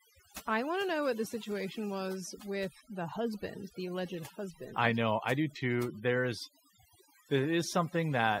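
Overdone noise removal throughout: an over-aggressive noise reducer cuts frequency bands near its noise estimate, leaving near-silent gaps with twinkling specks.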